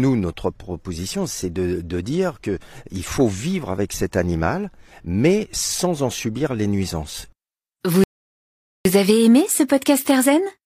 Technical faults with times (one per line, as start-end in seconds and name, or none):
8.04-8.85 rebuffering stall